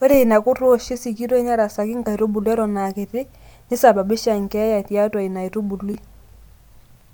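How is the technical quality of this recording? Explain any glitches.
The recording has one glitch, a case of chunks out of order, from 5.92 to 5.95 s. A 10 ms slice of the speech plays after the audio that should follow it, which fits a chunk arriving two places late. Nothing is lost. The misplaced order creates hard joins, heard as a brief jumbled stutter.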